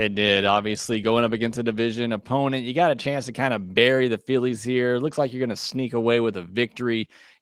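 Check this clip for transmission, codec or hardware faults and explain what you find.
No transmission, codec or hardware fault turns up in this speech, which carries only the light, full-band character of Opus voice compression in its hybrid mode, consistent with a moderate bitrate of around 24 kbps.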